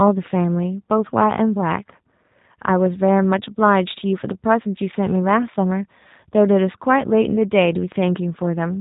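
From start to end, the speech carries G.729 codec damage that is plainly audible. The codec rebuilds each 10 ms frame from a vocal tract filter, a pitch predictor and a few sparse pulses, so voices come out slightly rough and synthetic, a character that fits G.729A at 8 kbit/s. On a spectrogram, energy stops sharply near 3.8 kHz with nothing above, and harmonics look smeared. The waveform keeps its envelope but loses fine detail.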